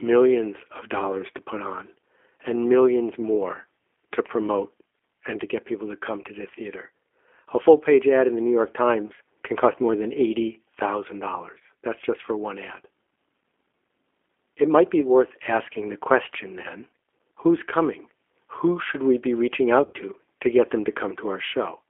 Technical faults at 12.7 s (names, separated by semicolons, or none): G.729 codec